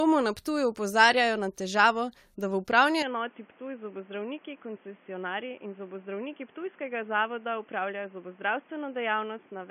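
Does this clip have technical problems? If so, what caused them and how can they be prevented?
Yes. Generation loss runs through the whole clip: the speech sounds swirly and hollow, with blurred attacks and nothing above 16.6 kHz. This is likely from repeated lossy re-encoding, a few passes of something like 96 kbit/s AAC-LC, each quantising on a shifted frame grid so the damage compounds. Keep a lossless master and encode only once, at the final step.

Input switched to a poorer device at 3.02 s, lasting to the end: the sound turns suddenly boxy and dull, cut off above 3.4 kHz, drops about 5 dB, and gains background noise about 30 dB below the speech, with no gap at the change. This likely happened when the system fell back to another microphone or a headset's narrowband call profile. Lock the input device and disable automatic switching before recording.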